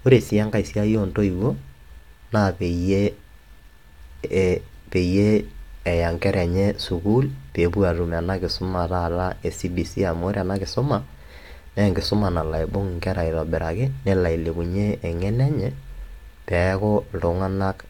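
A recording of speech, with no technical fault to be heard anywhere in it. Nothing in the signal calls for a timestamp or a cause.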